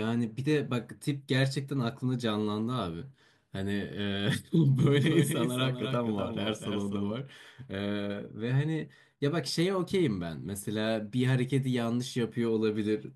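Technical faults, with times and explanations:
4.77–7.11 s, doubled audio track: a second full-band copy of the speech runs about 0.3 s behind, roughly 5 dB quieter, with no room colour. Likely a slower capture path.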